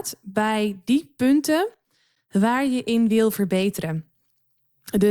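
At 2.15 s, just before "waar je in wil", the speech drops out for about 11 ms in a hard-edged hole of pure silence. This is a gap between stream segments: two segments' time stamps leave a small gap, and the player fills it with silence. No audio is lost.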